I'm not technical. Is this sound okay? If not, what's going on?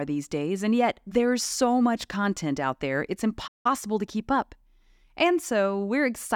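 No. A playback stall cuts the speech silent from 3.47 to 3.66 s, between "content out there it's" and "to keep up", likely because the player ran short of data or was briefly blocked.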